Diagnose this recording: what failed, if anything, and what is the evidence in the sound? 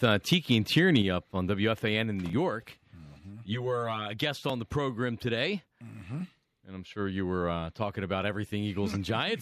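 Microphone overload, likely from input gain set too high at the converter: peaks run about 2 to 4 dB past full scale at 0.03–0.06 s and 0.32–0.96 s, flattening tops into harsh crackle before "up on".

Microphone volume stepped down, likely by call processing reacting to that clipping: at 1.02 s, just before "up on", level drops abruptly by about 5 dB.

Channel delay (comb filtering) at the driver or buffer stage: one channel lags by roughly 10 ms before mono summing, notching from around 50 Hz upward, sounding hollow 3.19–4.19 s, before "on the program today".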